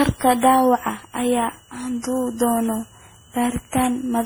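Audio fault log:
throughout, switching supply whistle: a faint high whistle sits well below the speech, its pitch wandering between about 2.84 and 3.02 kHz. A switching power supply running in an audible burst mode or beating with another supply radiates this tone, and its drift follows shifts in the supply's load.
throughout, generation loss: the speech sounds swirly, hollow and smeared, with consonant onsets blurred beyond what one low-bitrate encode would cause. The likely cause is about ten rounds of MP3 decoding and re-encoding at a rate near 64 kbit/s, each pass adding fresh quantisation noise and spectral holes.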